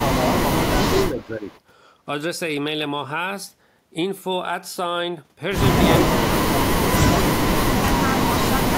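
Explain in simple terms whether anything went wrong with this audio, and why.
The speech dips at 1.09–1.49 s, 6.07–6.59 s, 7.62–7.84 s and from 8.01 s to the end. This is speech suppressed in double talk, likely an echo canceller turning everything down while both sides talked.

Faint, delayed copies of the speech surface at 1.19–1.26 s and 1.51–1.6 s, trailing by about 0.38 s. This is echo leak, likely loudspeaker sound the canceller failed to remove.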